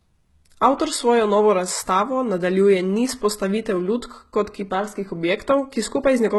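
Throughout the speech there is heavy codec damage. The treble sounds synthetic, and s sounds come out gritty, metallic and lispy. The harmonics above the crossover do not match those below. This is likely HE-AAC compression at a very low bitrate, around 16 kbps, rebuilding the top end by copying lower bands upward.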